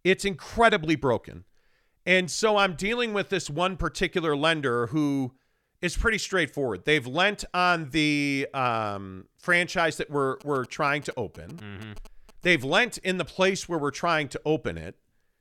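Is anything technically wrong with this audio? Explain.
Yes. GSM signalling bursts appear from 10.41 to 12.54 s, between "um franchise that we're" and "lent in the place". A nearby 2G phone sending short signalling bursts gets rectified by the audio circuitry. The result is a galloping dit-dit-dit of brief 217 Hz buzzes, sitting roughly 20 dB below the speech.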